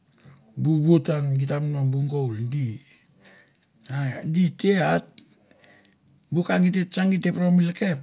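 Nothing goes wrong at any point in this recording of speech, so there's no fault to walk through.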